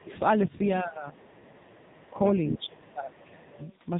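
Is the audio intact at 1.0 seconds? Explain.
No. Speech suppressed in double talk runs from 0.82 to 1.21 s, so 1.0 s falls inside it. The voice sinks by about 15 dB for roughly 0.4 s and turns thin and patchy before recovering. This is likely an echo canceller that heard both ends talking at once, could not tell the near talker apart from the loudspeaker echo, and attenuated everything it picked up, taking this voice down with the echo.

At the same moment, the whole clip carries the AMR narrowband mobile codec. Nothing passes above 3.8 kHz, so the voice is muffled and telephone-like. Its strong buzzy, synthetic texture points to a low-rate mode around 6.7 kbps. The codec rebuilds speech from a vocal-tract model driven by only a few pulses per 5 ms subframe. With so few bits, the natural detail of the voice is replaced by that mechanical buzz.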